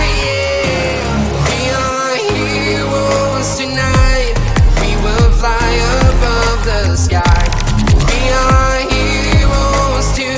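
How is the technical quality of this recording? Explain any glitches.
No technical glitches can be heard anywhere in the recording, and the signal stays intact and continuous throughout.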